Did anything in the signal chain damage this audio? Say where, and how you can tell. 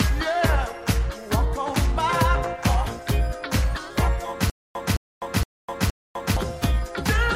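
Yes: from 4.50 to 6.37 s a stutter with silent gaps, a 214 ms burst repeating four times, each followed by 253 ms of dead silence, likely a stalled playback buffer retrying.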